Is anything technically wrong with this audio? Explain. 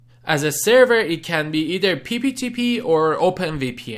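No, nothing technically wrong stands out here; it all sounds just as it should.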